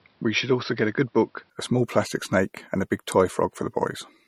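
A speech clip with two faults. For the first 1.5 s the sound is dull and boxy, then it clears up just as "a small plastic snake" begins, with no gap at the switch and roughly no change in level. The likely cause is an input switched to a poorer device, such as another microphone or a headset's call profile. On a spectrogram the opening 1.5 s shows nothing above 5.7 kHz, sitting over a background noise roughly 40 dB below the speech. The full band then returns abruptly. The waveform envelope stays about level across the join. Throughout the clip there is plainly audible codec damage: a watery, swirly texture, chirpy s sounds and smeared attacks, with nothing above 17.5 kHz. This is likely MP3 compression at a low bitrate, fitting 48 kbps. The encoder drops weak frequency lines when bits run short, so they blink on and off between frames. On a spectrogram that appears as a hard ceiling at 17.5 kHz, with patchy, flickering holes in the fainter regions below it.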